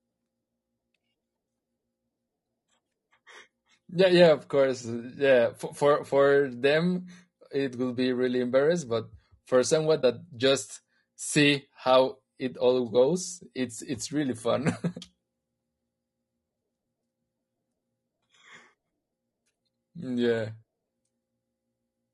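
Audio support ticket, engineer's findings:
Rough, grainy speech throughout the clip, with noise filling the gaps between harmonics and a dull, synthetic top band. Likely component: low-delay AAC compression (AAC-ELD) at about 32 kbps. Short transform frames resolve pitch harmonics poorly and cost extra bits, so at this rate the coder runs short and quantisation noise becomes plainly audible.

Brief dip in the speech at 10.01 to 10.04 s, about 20 ms lost, faded out and back in. Component: decoder concealment, AAC frame loss with muting. The pattern fits a single lost frame whose spectrum was zeroed, with the overlapping windows on either side providing the gentle fade.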